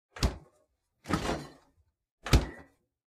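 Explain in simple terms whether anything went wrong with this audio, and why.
Nothing went wrong here.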